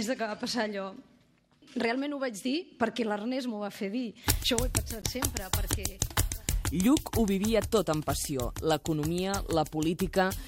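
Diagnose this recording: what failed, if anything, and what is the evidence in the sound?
Two short, foreign bursts cut through the sound: a faint glitch from 5.02 to 5.04 s, and a louder, longer glitch from 9.29 to 9.38 s, peaking around -20 dBFS against roughly -35 dBFS for the first. This is a codec-stage failure, a corrupt frame decoded. Flipped bits in the compressed stream were played rather than concealed, so misread gains and codes put energy at the wrong frequencies for the length of the damage, which fits a couple of frames the first time and a few the second.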